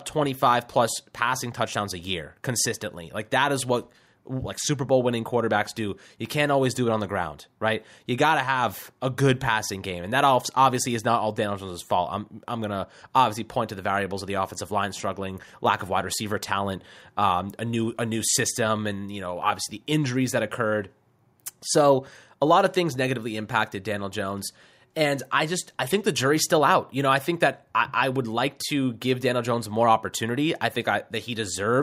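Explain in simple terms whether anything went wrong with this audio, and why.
Nothing went wrong here.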